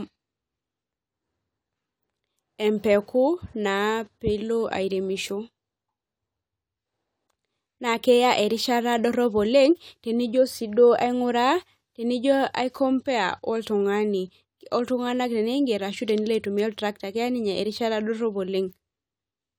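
Listening closely to the recorded speech, nothing technical stood out as a problem at any point.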